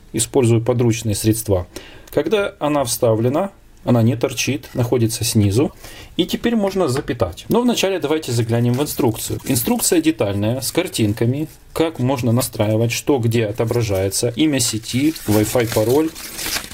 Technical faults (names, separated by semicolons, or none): damaged data in a compressed stream